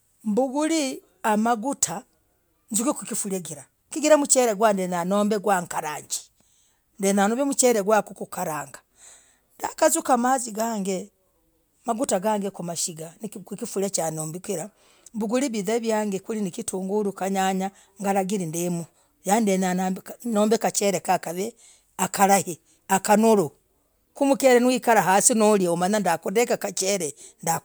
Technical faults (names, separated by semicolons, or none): none